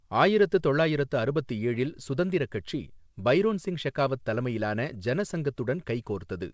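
A speech recording heard through a G.722 call path that leaves nothing above 8 kHz, with nothing technically wrong with it.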